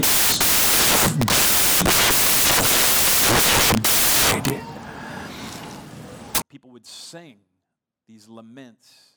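A speech clip whose first 6.42 seconds are loud, harsh broadband noise. Samples are built from the wrong bytes there. Low bits become the large part of each value.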